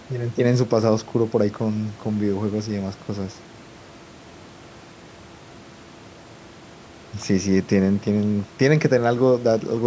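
No technical faults are audible.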